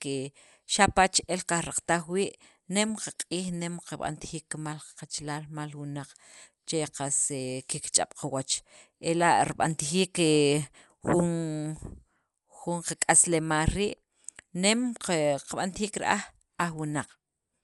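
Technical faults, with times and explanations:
Throughout, Dolby Digital compression: The speech sounds dull and plainly damaged. Nothing is heard above 11.4 kHz, so the top of the band is gone. A rough, fluttering noise hangs around the voiced tones. The likely cause is a low-bitrate Dolby Digital encode, and the damage fits about 64 kbps. At that rate the encoder narrows the band. It leaves many frequency lines without detail, and the decoder fills them with noise.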